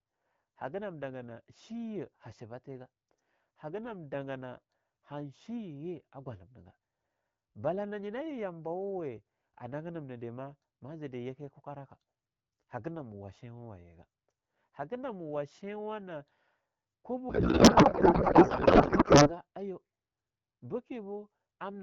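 From 17.29 to 19.35 s the speech turns into garbled noise and warble that barely follows it. This is a codec payload misread: octet-aligned AMR-WB frames were unpacked as bandwidth-efficient, so the decoder found every field shifted out of place.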